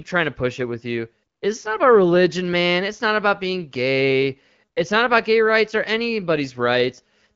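No technical faults are audible in this speech recording.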